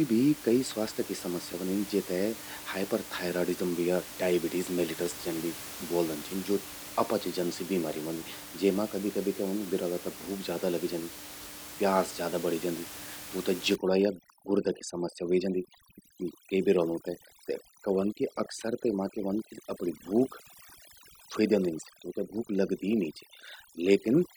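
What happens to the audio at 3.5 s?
Nothing goes wrong at 3.5 s: the speech carries on intact, with only the room's background noise sitting about 14 dB beneath it.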